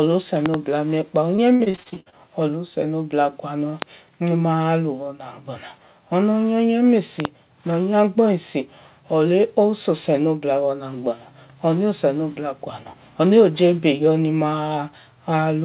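A speech clip, carried over a narrowband call line with nothing above 4 kHz, which fits a G.711 call codec. It has two kinds of fault. First, loud pops. There is a double pop from 0.46 to 0.56 s, about 15 dB above the speech. A single sharp pop comes at 3.82 to 3.84 s, about 20 dB up. Another double pop runs from 7.20 to 7.27 s, again about 15 dB up. The speech carries on beneath each one. The likely cause is a sudden voltage step, such as a plug, switch or static discharge, which the following circuits shape into a thump. Second, repeated packet loss with a robotic sound, from 1.36 to 2.14 s. Audio drops out 11 times in that stretch, the longest gap lasting 56 ms. Each hole is patched by stretching the preceding sound. About 39% of the span is filled this way, so the speech turns choppy, with pieces missing.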